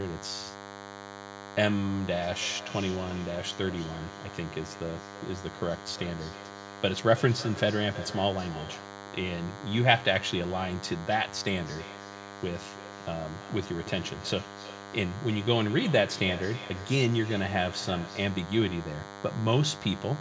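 A DECT cordless phone buzz runs through the whole recording: a thin, steady 100 Hz buzz rich in harmonics, from a nearby handset's radio bursts being rectified, roughly 15 dB below the speech. From 2.3 to 9.11 s and again from 11.56 to 18.48 s there is feedback echo between two devices, with speech returning every third of a second or so, thinner and ringing, peaking about 16 dB below the speech.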